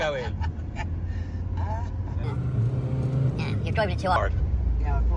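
From 2.24 to 4.16 s the sound jumps to a wrong sample rate. It runs 1.38 times faster and sits about 5.5 semitones higher, which fits 16 kHz material played at 22 kHz. Speed and pitch rise together, unlike a pitch shift or time-stretch, which alters only one.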